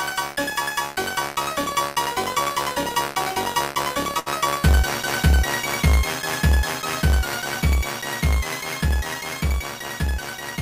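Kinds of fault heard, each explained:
Short stall from a late packet: a packet missed its playout time and the jitter buffer ran dry, so the receiver held the last sound for 69 ms near 4.2 s, then resumed exactly where it stopped, losing nothing but running 69 ms later.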